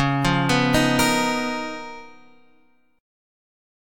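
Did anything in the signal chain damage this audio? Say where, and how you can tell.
No, nothing along the chain seems to have touched this one, so there's no stage to point to and nothing to explain.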